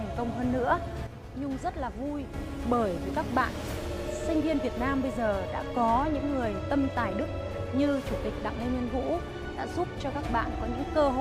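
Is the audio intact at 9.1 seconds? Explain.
Yes, at 9.1 seconds the audio is intact, with no dropout, click, distortion or other fault audible at that moment.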